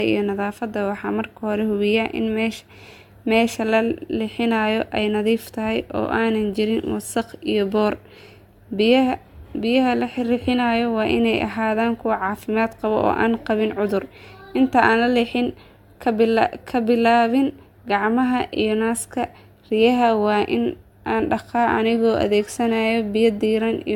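Speech with generation loss throughout: the sound is swirly, smeared and hollow, transients are blurred, and nothing is present above 17 kHz. This likely comes from around three successive lossy encodes, which fits an AAC-LC chain at 96 kbit/s.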